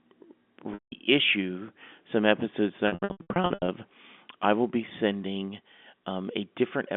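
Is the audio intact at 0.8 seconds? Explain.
No. At 0.8 seconds the sound briefly turns into a held, buzzy tone that quickly fades to silence, then returns through a short cross-fade at 0.92 s. This is packet loss with pitch repetition, spanning 0.74 to 0.92 s. About 180 ms of audio went missing, which fits a run of roughly nine 20 ms packets. The receiver filled the gap by looping the last pitch period and fading it out over about 50 ms.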